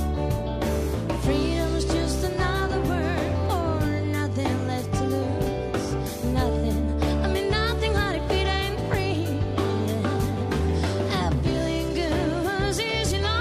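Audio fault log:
No fault is audible anywhere in the signal, which holds steady in continuity and timing throughout.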